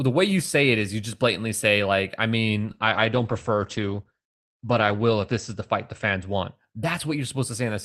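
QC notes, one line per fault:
2.66–6.73 s, call bitrate drop: right after "blatantly say like I" the speech turns muffled and rough. The encoder's budget fell from 48 to 12 kbps and sat at its lowest for 2.48 s, coarsening the coding and cutting bandwidth from 20 kHz to 8 kHz.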